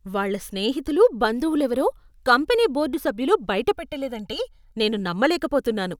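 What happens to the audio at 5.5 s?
At 5.5 s the speech plays through intact, with no dropout, click, distortion or other fault at that moment.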